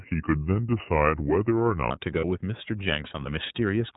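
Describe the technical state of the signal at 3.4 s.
At 3.4 s the speech is still running through the iLBC codec, which colours the whole clip rather than a single moment. Each 30 ms frame's excitation is coded independently, and the plainly audible roughness and slightly synthetic texture fit the 13.33 kbps mode. On a spectrogram, energy stops sharply at 4 kHz with nothing above. The waveform looks smoothed, its fine detail replaced by a grainier, frame-by-frame approximation.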